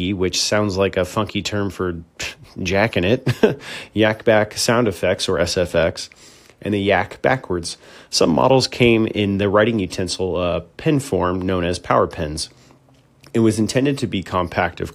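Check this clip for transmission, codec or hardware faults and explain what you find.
No transmission, codec or hardware fault can be heard anywhere in this speech recording, and the signal stays intact and continuous throughout.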